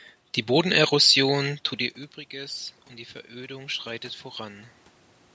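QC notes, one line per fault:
3.3–4.6 s, automatic gain rising: just after "und die" the speech and the room noise behind it swell up together over about a second, by roughly 4 dB. The input level had fallen by about 18 dB, so the call's gain control read it as too quiet and slowly turned itself up. Because it boosts everything at once, the background rises in step with the voice rather than the talker simply getting louder.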